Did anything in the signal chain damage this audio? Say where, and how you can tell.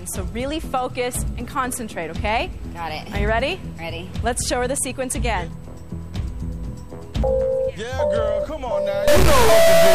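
Yes. From 9.08 s to the end at 9.94 s, a stuck bit, likely in the converter or a broken data line, adds buzzy distortion. It is a high bit, with error steps of about -10 dBFS. The waveform shows square offsets, and the spectrogram shows broadband smearing.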